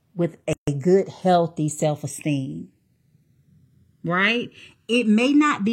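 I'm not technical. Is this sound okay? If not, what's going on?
No. Two faults stand out in this speech clip.

From 0.53 to 0.68 s the sound drops out for about 144 ms, just before "good healthy self esteem". This is a gap at a join of encoded pieces. The audio was saved in separate chunks and stuck together. Each chunk kept a bit of silence at its edge, so a short hole with smeared edges opens, then the speech picks up where it stopped.

Throughout, the left and right channels are drifting apart. They were recorded on two devices whose clocks run at slightly different speeds. The delay between them slowly grows, reaching roughly a millisecond by the end. Heard together, this gives a slow, sweeping, swirly flanging tone.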